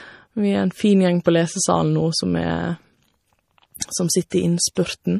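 From the start the speech sounds watery and swirly, with nothing above 15.2 kHz. That's likely MP3 compression running short of bits, which fits around 40 kbps. There's pre-echo at 1.24 s, just before "på lesesalen", then at 3.74 s, 4.30 to 4.32 s and 4.75 s. Block-spread codec noise leaks ahead of each attack as a brief hiss, softening the onsets.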